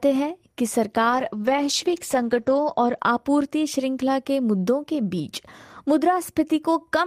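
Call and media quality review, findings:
Call bitrate drop, 1.11–3.05 s: bandwidth estimate fell and the encoder was starved of bits, consistent with about 32 down to 11 kbps. Coarser Opus coding cuts the top end from 20 kHz to 8 kHz. Speech goes muffled and rough, worst for 1.6 s.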